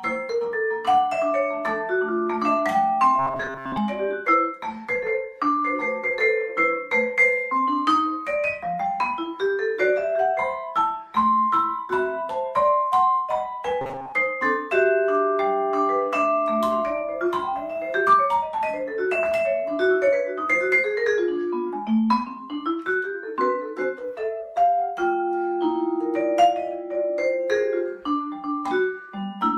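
Audio likely arrived too seldom, so short buffers of roughly 7.5 ms were repeated in place of the skipped material, producing robotic sound from repeated short buffers at 3.19–3.78 s and 13.81–14.13 s: a rigid, metallic 134 Hz buzz replaces most of the sound.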